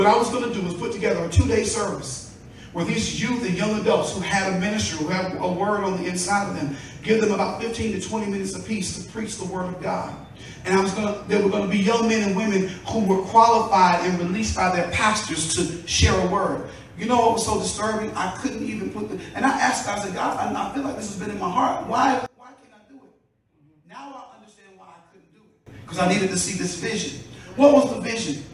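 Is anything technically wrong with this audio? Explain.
Yes. From 22.26 to 25.66 s the sound collapses to a faint trace, falling by about 26 dB, with its centre nearly gone. This is likely one channel inverted: with one side's polarity reversed, everything shared between channels cancels on mono summing, leaving only their difference.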